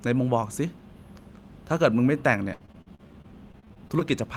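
A speech recording that turns choppy and robotic from 2.53 to 4.02 s, the mark of repeated packet loss. Around a dozen short holes, the longest about 63 ms, are patched by stretching the preceding sound, which gives the robotic sound, while some audio is simply missing. Roughly a quarter of that span is concealed. Unlike a single dropout, the holes recur in quick succession, and unlike codec warble, sound is actually lost.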